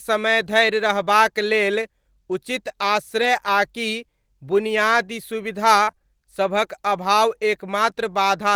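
Speech clip with two packet-loss faults. Just after "रहबाक लेल उचित", from 3.21 to 3.27 s, a lost packet is rebuilt from error correction. About 40 ms is replaced by low-bitrate copies, which fits two lost packets. There is no gap, but the sound turns briefly rough and noisy. From 5.83 to 6.05 s, repeated packet loss gives choppy, robotic sound. Five gaps are patched by stretching earlier sound, the longest 38 ms. Roughly half the span is concealed.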